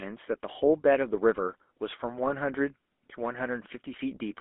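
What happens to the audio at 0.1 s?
At 0.1 s the speech already carries the GSM full-rate codec, present throughout. Pulse-driven vocal-tract coding, likely at 13 kbps, gives a plainly audible buzzy roughness within roughly 250 Hz to 3.5 kHz.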